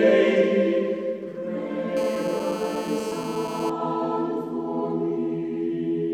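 A hard, raspy 217 Hz buzz rich in harmonics sits steadily under the audio from 1.97 to 3.70 s, about 12 dB below it: GSM phone buzz, from a nearby phone on a call whose transmit bursts the audio circuit rectifies.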